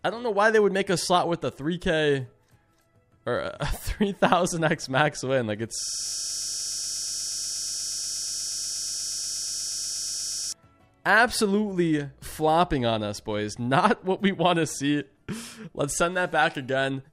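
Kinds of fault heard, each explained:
System hang loop: From 5.80 s to 10.52 s something upstream froze, and the sound hardware kept replaying the same small stretch of its ring buffer. The loop here is only 20 ms long, so instead of a stutter you get a steady buzz at 50 Hz, with that one slice repeating about 236 times across nearly five seconds. The tiny buffer makes it sound like a flat, stuck drone rather than anything rhythmic.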